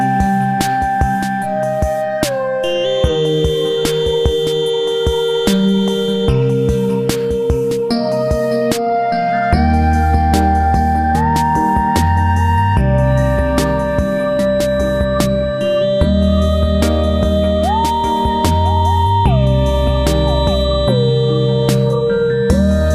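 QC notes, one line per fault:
13.01–22.95 s, feedback whistle: the loudspeaker-to-microphone loop has likely settled right at the edge of feedback, so one tone near 3.9 kHz keeps ringing without running away. It's heard as a thin whistle at one pitch, slowly swelling and fading, roughly 25 dB beneath the sound, lasting to the end.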